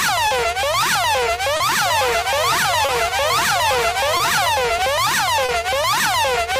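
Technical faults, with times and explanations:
Throughout: clock drift between sender and receiver. The sender's clock runs roughly 2% slow, so the receiver's buffer keeps draining and small timing hiccups recur across the clip.
0.28–0.33 s, 1.57–1.62 s, 2.86–2.91 s, 4.17–4.22 s, 5.46–5.51 s: short stall from a late packet. Each time the buffer ran empty, so the sound is held about 30 ms, then resumes with nothing lost.
1.85–4.49 s: doubled audio track. A dry, full-band copy trails by around 400 ms at about 10 dB lower, starting and stopping abruptly, likely from a second, slower capture path.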